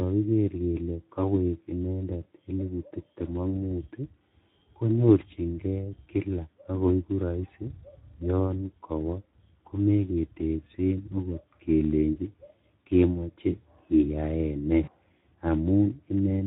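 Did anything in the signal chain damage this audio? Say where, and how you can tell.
Yes. At the codec stage, the whole clip has been through the Speex codec at a low setting, which points to a bitrate around 11 kbps. Too few bits go to the excitation, so the speech sounds plainly hoarse and noisy throughout, with a roughened, grainy texture.

In the network stage, packets went missing, and the decoder applied VoIP packet loss concealment from 14.84 to 14.92 s. The gap of about 40 ms, which fits two lost 20 ms frames, is patched by extending the last pitch and filter. You hear a brief, fading smear instead of the speech.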